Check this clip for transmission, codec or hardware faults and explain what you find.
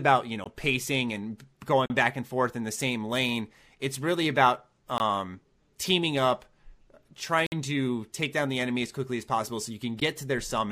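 The speech drops out five times, each a block of digital silence. Short holes cut in at 0.44–0.46 s, between "you know" and "pacing and"; at 1.86–1.90 s; at 4.98–5.00 s; and at 7.46–7.52 s, just before "to take down the". A single tick falls at 10.00 s, after "as possible so you". The gaps last 15 to 56 ms. In each, the samples were replaced by zeros with no fade, as happens when the output buffer is not filled in time.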